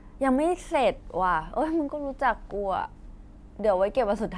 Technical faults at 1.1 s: none

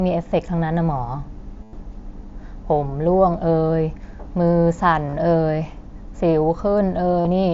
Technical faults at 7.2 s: concealed Bluetooth headset packet loss

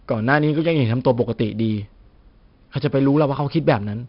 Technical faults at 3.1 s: 4-bit ADPCM compression

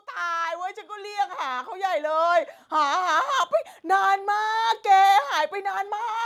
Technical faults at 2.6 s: automatic gain rising

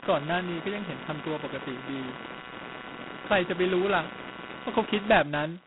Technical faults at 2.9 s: computer activity noise; G.726 ADPCM

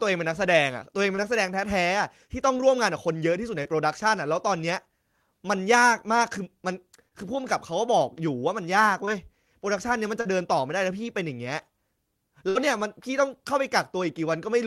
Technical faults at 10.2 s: short concealed packet loss

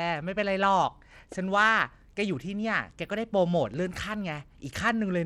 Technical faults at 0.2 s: Bluetooth SBC compression

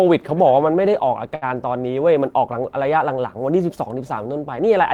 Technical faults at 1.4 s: short stall from a late packet

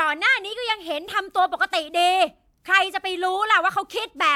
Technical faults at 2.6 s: none

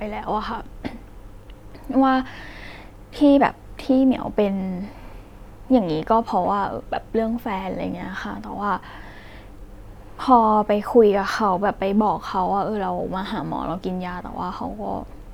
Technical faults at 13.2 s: none

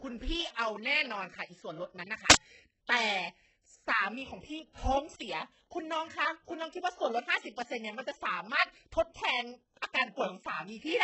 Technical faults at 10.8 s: HE-AAC compression

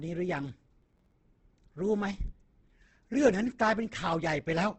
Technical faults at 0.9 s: Opus compression; processor overload crackle

